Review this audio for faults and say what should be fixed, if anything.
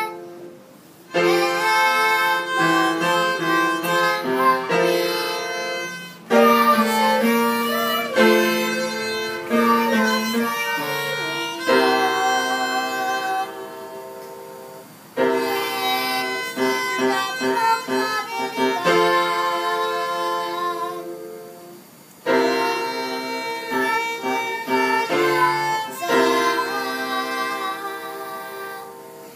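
Nothing stood out on listening, so there is nothing here that needs fixing.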